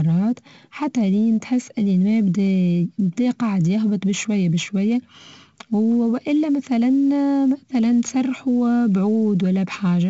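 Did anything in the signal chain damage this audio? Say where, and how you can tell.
Yes, at the codec stage: 4-bit ADPCM compression throughout. Every loud stretch of the speech carries a gritty hiss that rises and falls with level, attacks sound roughened, and nothing survives above 7.7 kHz. Damage is heavy, fitting a 64 kbps stream.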